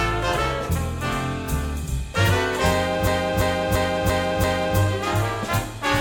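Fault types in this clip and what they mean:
System hang loop: a 341 ms slice of the music stutters five times from 3.07 to 4.78 s, as the hardware kept replaying its buffer while the system froze.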